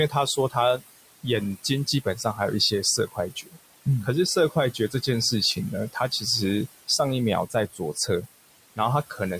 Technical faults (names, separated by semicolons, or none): noise suppressor artifacts; speech cut by the noise suppressor